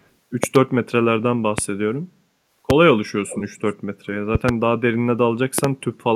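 A sudden voltage step, likely from a plug, switch, static or driver glitch, enters the signal as a loud pop each time, peaking about 20 dB above the speech: a double pop at 0.44 to 0.58 s, single pops at 1.58 to 1.61 s and, slightly softer at about 15 dB, 2.70 to 2.73 s. Each is a sharp thump over speech that carries on beneath it.

From 3.29 to 3.61 s, an echo leak appears: a far-end echo canceller likely failed to remove its loudspeaker's output from its microphone, sending it back. A copy of the speech trails 382 ms behind, about 15 dB below it, as a faint, brief repeat.

The double pops return at 4.35 to 4.51 s and 5.58 to 5.67 s, again about 20 dB above the speech.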